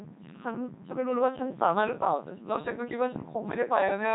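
From start to finish the speech sounds robotic and buzzy, with a synthetic edge and heavy damage to its natural texture, and nothing reaches above 3.8 kHz. This is the Codec 2 vocoder at work, with the quality pointing to its 3.2 kbit/s mode. Rather than keeping the waveform, it transmits only pitch, voicing, energy and a coarse spectral envelope, and the decoder rebuilds the voice from sine waves, which produces that buzzy, artificial character.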